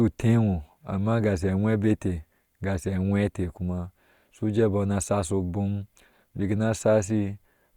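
No technical faults are audible anywhere in this recording.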